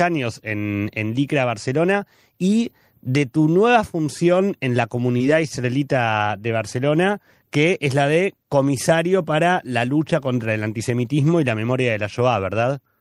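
At 5.17 to 5.23 s, short concealed packet loss: about 20 ms of the speech never reached the decoder in time, and the receiver filled roughly 25 ms by extending the preceding sound, adding a few milliseconds. It comes across as a brief smear before normal playback resumes.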